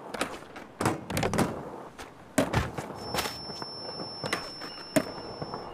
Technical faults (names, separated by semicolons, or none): feedback whistle